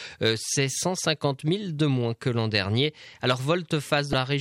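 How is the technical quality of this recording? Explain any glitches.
There is one glitch, right near the end. Damaged data in a compressed stream appears from 4.10 to 4.14 s. Corrupted bytes in the encoded file make the decoder misread those frames and lose sync while it hunts for the next valid frame header, leaving a brief glitch of about 34 ms.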